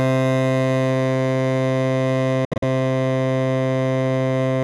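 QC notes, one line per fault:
2.45–2.63 s, Bluetooth dropout: music cuts to silence in gaps totalling 128 ms, longest 64 ms, likely from late wireless packets being dropped; playback resumes further along.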